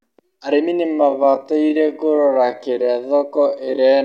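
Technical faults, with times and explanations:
0.81 to 4.04 s, time-stretched section: the speech abruptly drops to 0.56 times its pace and stays there to the end with pitch unchanged, likely from software lengthening the audio by repeating short slices, which makes it drag.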